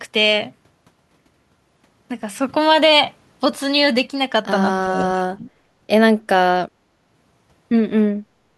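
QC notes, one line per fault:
4.81–5.49 s, speech suppressed in double talk: the voice dips deeply, around 30 dB, for about half a second, likely from the echo canceller misjudging it as loudspeaker echo.
8.25–8.58 s, background gated by the echo canceller: room sound drops about 11 dB for roughly a third of a second, pulled down hard while loudspeaker playback was detected.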